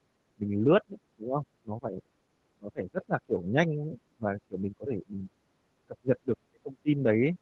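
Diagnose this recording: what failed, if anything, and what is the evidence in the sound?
The room sound at the very start, from 0.01 to 0.07 s, ducks by about 13 dB and then snaps back. This is background gated by the echo canceller in call processing: with the loudspeaker active, the canceller clamped the microphone gain hard.

The speech sinks repeatedly at 0.35–0.99, 1.15–1.46, 1.62–2.11, 2.52–3.92, 4.08–5.3 and 5.86–7.38 s, dropping roughly 20 to 30 dB, deepest near the end. This is likely speech suppressed in double talk: the canceller mistook near-end speech for echo and attenuated both.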